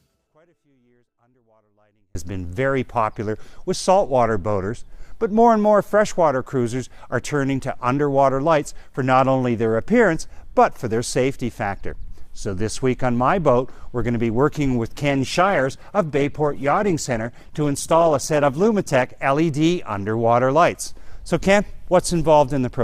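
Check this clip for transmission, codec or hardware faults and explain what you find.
Two faults are present: a dropout at the start and a temporary drop in stream quality later on.

From 0 to 2.15 s, the clip opens already inside an audio dropout to a faint residue. The signal path likely lost its input while staying live, so only a faint leak about 40 dB below normal remains until the sound returns abruptly.

From 15.09 to 19.09 s, the adaptive stream switched to a lower bitrate, consistent with a step from around 64 to 16 kbit/s Opus. Codec artefacts rise during this stretch, then full clarity returns suddenly with no gap.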